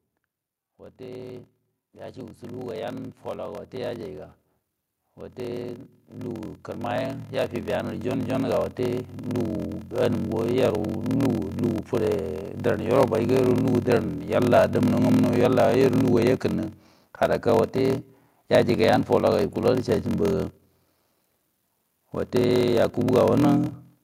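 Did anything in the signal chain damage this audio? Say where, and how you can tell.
Yes. At the driver or buffer stage there is a block size mismatch (padded), throughout. A steady buzz runs at 41.7 Hz. The speech plays slow, at 0.889 times normal speed, with pitch about right. This fits 1024-sample blocks written into larger reads, with each remainder filled by silence.

The call processing shows automatic gain rising twice. From 0.97 to 4.27 s, speech and background swell together by about 6 dB. From 5.15 to 10.8 s, they climb by about 10 dB. The gain control judged the input too quiet and raised its level gradually.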